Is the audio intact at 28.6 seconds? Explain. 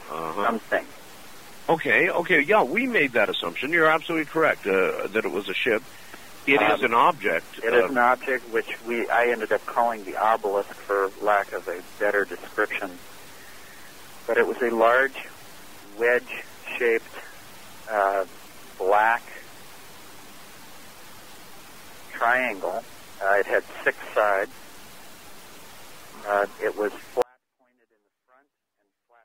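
No. At 28.6 seconds the audio is in an audio dropout to a faint residue, which begins abruptly at 27.22 s and runs to the end of the clip. The wanted signal likely lost its feed while the path after the break stayed live, so only a faint leak remains, roughly 40 dB below normal level. Unlike a pause or a fade, the drop is instant rather than gradual, and the gap is not true silence.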